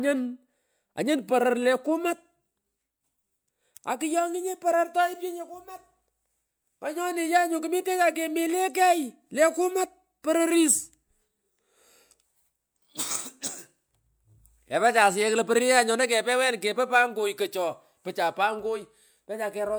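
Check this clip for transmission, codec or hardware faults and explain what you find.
Nothing in the recording points to a fault. There is nothing to report at any point in the speech.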